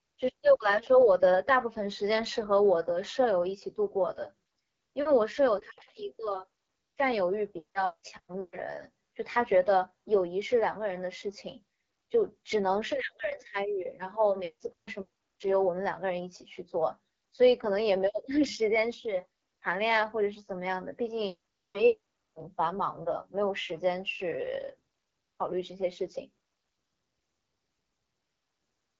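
From start to finish the speech carries AMR wideband (HD Voice) codec damage, and it is plainly audible. The low rate suggests one of the two bottom AMR-WB modes, around 8.85 kbit/s, where the pulse-driven vocal model makes voiced sound rough and raspy. On a spectrogram, energy stops sharply near 7.5 kHz, and the top band shows smeared, noise-like texture instead of harmonics.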